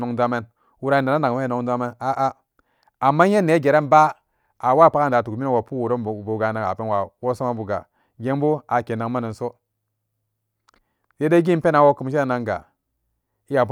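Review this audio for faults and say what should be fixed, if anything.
No faults can be heard anywhere in the speech, so nothing needs to be fixed. No repair or preventive change is called for.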